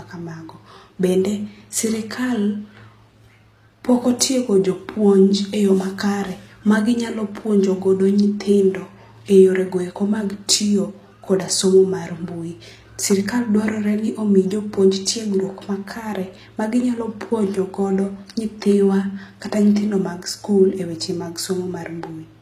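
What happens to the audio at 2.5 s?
Low-bitrate audio saved at a high bitrate is what shapes the speech at 2.5 s, as it does across the whole clip. The sound carries the thin, smeared detail of heavy compression, which fits a pass through a low-bitrate codec such as HE-AAC near 24 kbit/s, likely later re-encoded as a roomy MP3 around 192 kbit/s. The larger second file cannot bring back what the first encoding discarded, so the earlier damage stays audible.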